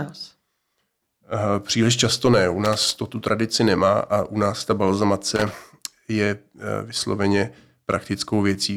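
Loose connector crackle appears from 2.65 to 2.95 s, just before "to tu tradici nemá", and again from 5.36 to 5.62 s, ahead of "je vysloveně": a worn contact repeatedly breaking and remaking, chopping the speech into a ragged, irregular burst of scratchy crackle.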